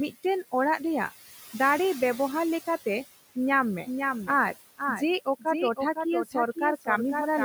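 A speech recording with noise suppressor artifacts throughout: the room noise, about 17 dB below the voice, is pulled down by about 14 dB in the gaps and swells back under each phrase. Unlike a gate, which switches noise on and off, the suppressor works band by band. From 3.52 s to the end there is a doubled audio track: a dry, full-band copy running about half a second late and a few dB quieter, most likely a second capture path or misaligned edit. It starts abruptly and carries no decay or room colour, which separates it from reverb or an echo. The speech cut by the noise suppressor falls at 5.25–5.46 s, dipping by about 17 dB, and at 6.25–6.35 s, by about 13 dB. Brief consonants or endings there sound swallowed, a dip in the voice alone rather than a dropout of the whole signal.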